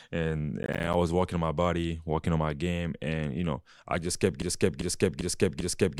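From 0.63 to 0.94 s, just before "was working on my", processor overload crackle tears through the speech: roughly ten missed buffers of about 10 ms each drop to silence, leaving a burst of sharp gaps. Unlike a single dropout, it is a rapid gritty cluster that stops once the load passes.

At 4.42 s, after "know I just kept", a broken-record loop begins, likely from a stalled player or stream resending its last fragment. A 0.40 s piece repeats exactly four times through to the end, and the speech that should follow is lost. Unlike an echo, it does not fade between repeats.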